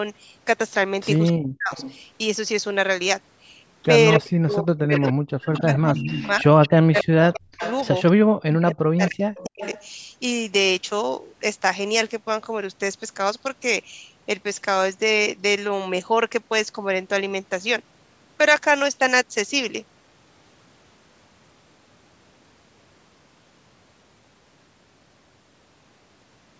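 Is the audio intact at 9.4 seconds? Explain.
No. At 9.4 s two faults overlap. Speech suppressed in double talk runs from 8.3 to 9.75 s. The voice dips and breaks into pieces, about a second in all, falling as far as about 40 dB down. This is likely an echo canceller that heard both sides at once and, unable to separate its own talker from loudspeaker echo, turned everything down. Unlike a network dropout, the gaps track the overlap with the far side rather than landing at random.

An echo leak spans 9.36 to 9.85 s. A delayed copy of the voice returns 259 ms late, about 20 dB quieter. It is likely residue the canceller failed to remove before sending it back. A room reflection arrives within a few milliseconds and blurs the sound, while this copy is distinct and heard as a separate late repeat.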